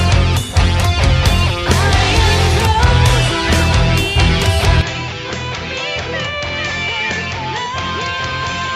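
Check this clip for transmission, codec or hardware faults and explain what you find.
One fault: from 4.81 s to the end, the sound abruptly loses everything above 7.6 kHz, drops about 10 dB in level and gains a faint new background noise, with no silence at the joint. The likely cause is an input switched to a poorer device. A codec bandwidth cut would not change the level or the noise floor.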